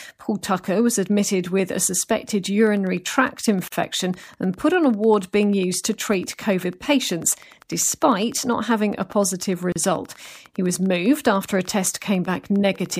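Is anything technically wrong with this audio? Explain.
Yes, there are two faults. From 2.67 s to 12.97 s, just after "admitted with a suspected", a train of clicks runs under the speech, likely from interference or a faulty connection injecting pulses. Some hundred similar ticks arrive regularly at about 10 per second, roughly as loud as the speech and audible in pauses too.

There are also gaps at joins of encoded pieces, one at 3.68 to 3.72 s lasting 46 ms and one at 9.72 to 9.76 s lasting 34 ms. The pieces, six seconds apart, were encoded separately and joined with their start delay and end padding left in, so the speech drops out and then resumes where it stopped.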